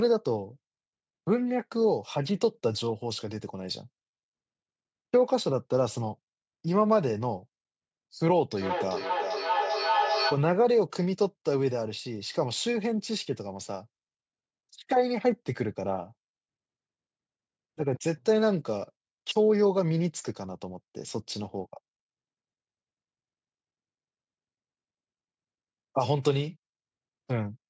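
A speech recording, band-limited to nothing above 8 kHz by the call's microphone processing, carries a feedback echo between two devices from 8.57 to 10.54 s. One device replays the other's microphone signal, which is picked up again and sent back, so the sound returns at roughly 0.4 s intervals, thinner and more ringing each pass, peaking at about 2 dB below the speech. On a waveform this shows as evenly spaced copies trailing each burst, and on a spectrogram as repeated, increasingly narrow-band smears of the same pattern.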